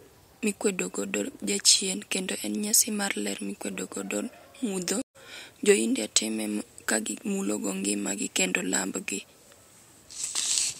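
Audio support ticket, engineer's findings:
Speech drops out 5.02–5.16 s: about 128 ms of silence, then resumes roughly a tenth of a second further on, with a short fade-in. Stream reconnect: connection lost, player rejoined the live stream, fresh decoder started mid-stream, skipped material never recovered.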